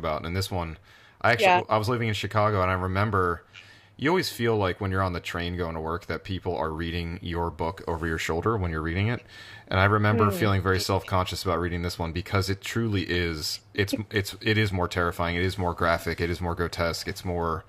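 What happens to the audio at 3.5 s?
Nothing goes wrong at 3.5 s: the speech carries on intact through that moment, with no dropout, click, distortion or other fault.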